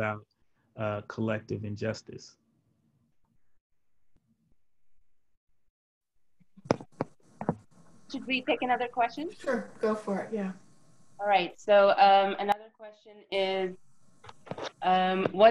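From 12.52 to 13.32 s, one stereo channel is likely inverted in polarity, so whatever the two channels share cancels when they are summed to mono. The sound drops by about 20 dB, leaving only the faint difference between the channels.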